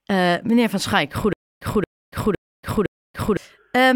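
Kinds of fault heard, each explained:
Stutter with silent gaps: from 1.33 s to 3.37 s the speech catches on one short fragment of about 230 ms, plays it four times, and leaves roughly 280 ms of dead digital silence after each pass, so it ticks along at an even beat of about one every half second. The likely cause is a player or stream stalling and replaying its last chunk on each retry, so whatever should have filled those two seconds is simply missing.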